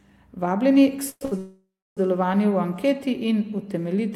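A speech clip with three hold-ups close together. Call audio freeze at 1.09 to 1.23 s. The last sound is carried on as a fading buzz or hiss, 117 ms filled in all, ending in about 40 ms of silence. Nothing is lost; the audio resumes where it stopped. Likely cause: delayed packets draining the jitter buffer. A short stall from a late packet follows at 1.25 to 1.34 s. The last sound is stretched for 66 ms until the packet lands, then continues. A longer call audio freeze runs from 1.38 to 1.99 s. About 590 ms is filled, including roughly 300 ms of silence, with the same likely cause. All three add delay rather than removing audio.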